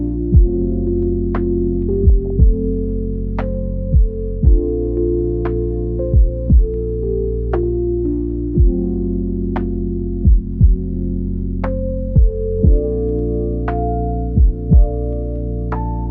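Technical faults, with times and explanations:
2.26–2.30 s and 7.54–7.63 s: DAB burbling. Bit errors at a rate of about 0.3 and 0.15 percent escape the error correction and corrupt MP2 sub-band samples, so short blips of noise appear in single bands.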